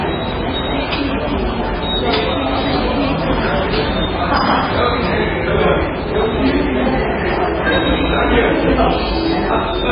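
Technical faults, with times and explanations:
Throughout, MP3 compression: nothing above 5 kHz and a watery, swirling texture with smeared attacks, likely from heavy MP3 encoding at a low bitrate around 16 kbps.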